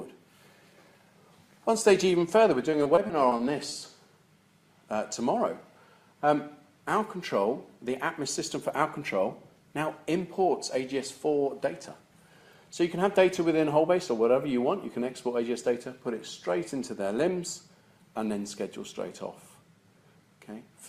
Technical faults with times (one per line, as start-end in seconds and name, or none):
2.71-3.77 repeated packet loss (robotic sound)